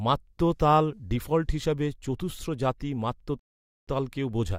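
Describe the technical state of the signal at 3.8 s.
At 3.8 s the signal is silent, inside a rebuffering stall that runs from 3.39 to 3.88 s. The player exhausted its downloaded audio and paused until more data arrived, inserting about 0.48 s of dead air into the speech. What separates this from a dropout or packet loss is the restart: the speech picks up exactly where it halted, with nothing skipped. The gap adds time rather than removing any of the recording.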